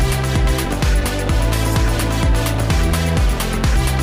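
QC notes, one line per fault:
2.54 s, repeated buffer: new audio did not reach the output in time, so the device played its last block again, twice more, giving three back-to-back copies of a piece only about 1.33 ms long, which fits a 64-sample buffer. The copies are so short that they are not heard as a stutter. The hard joins where each copy restarts give a brief click or buzz, and essentially no audio is lost.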